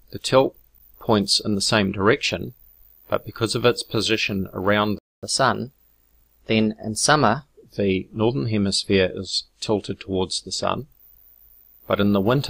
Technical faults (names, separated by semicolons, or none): playback stall; catch-up at higher speed